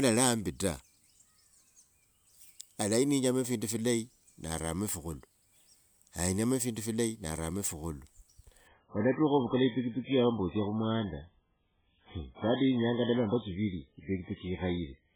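At 8.67 s the speech drops abruptly to an adaptive stream at a lower bitrate, and it stays there to the end. The player seems to have switched to a much leaner encoding after the connection slowed, with no gap at the switch. From that point everything above 3.8 kHz is gone, so sibilants dull and the sound turns muffled and watery, which fits a step from around 128 kbit/s down to about 8 kbit/s MP3. On a spectrogram the upper band ends in a sharp vertical edge at 8.67 s, leaving a flat ceiling near 3.8 kHz, while the waveform shows no break.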